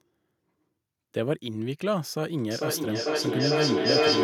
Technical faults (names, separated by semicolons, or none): feedback echo between two devices